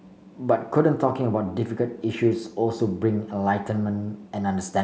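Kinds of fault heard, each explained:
No faults can be heard in this recording.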